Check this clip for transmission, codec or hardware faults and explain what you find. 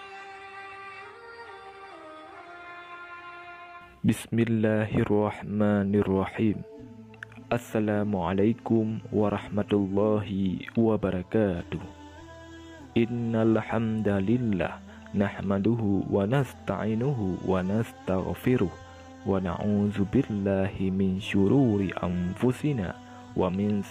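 Nothing stood out on listening to this clip.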